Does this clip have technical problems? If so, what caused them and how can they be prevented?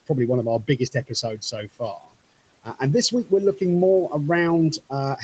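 Yes. The noise suppressor cut parts of the speech. From 0.64 to 1.54 s, right after "probably one of our", it mistook stretches of speech for background noise, about a fifth of a second in total. It pulled them down by about 17 dB, so they sound swallowed. At 1.98 to 2.16 s it cut about a tenth of a second, dropping the sound by about 18 dB. To prevent this, use a gentler suppression setting.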